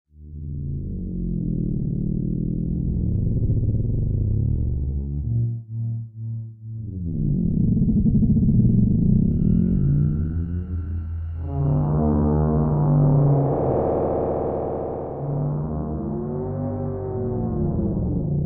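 No technical faults are audible anywhere in the recording.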